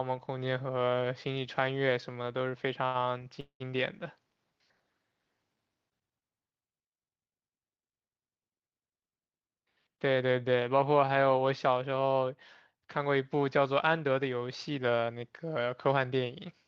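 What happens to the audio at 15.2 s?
The speech briefly sounds hurried, running about 9% faster while keeping its normal pitch, from 14.71 s to 16.12 s. This is a jitter buffer speed-up. The receiver's buffer had built up more audio than it targets, so to catch up it repeatedly cut out short slices one or a few pitch periods long, trimming roughly 150 ms in total across that stretch. The rhythm tightens, but the pitch is unchanged.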